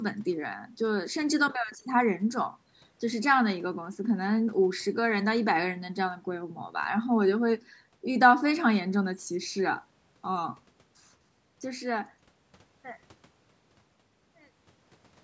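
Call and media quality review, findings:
Nothing stood out on listening to this speech; the gentle fade-out over roughly the last four seconds and the call-style microphone band limit, with nothing above 8 kHz, both sound as intended.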